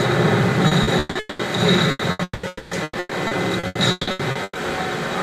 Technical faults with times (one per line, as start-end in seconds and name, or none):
0.67-1.42 repeated packet loss (robotic sound)
1.91-2.22 burst of packet loss
2.23-2.74 long network dropout
2.83-4.58 repeated packet loss (robotic sound)